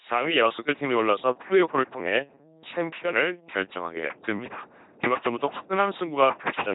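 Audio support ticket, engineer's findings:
LPC-10 vocoder, full clip. Speech buzzy and robotic, harsh throughout. No content above 3.8 kHz. Low-rate 2.4 kbit/s codec is resynthesising the voice from a ten-pole filter. Each frame is excited by either a pulse train or noise, never a mix. Misjudged voicing gives stray buzz or hiss.

Mains hum, 0.53 s to end. Steady 50 Hz tone with low harmonics, strong, close to speech level. Probable ground loop or nearby transformer coupling power line into the signal path. Persists to the end.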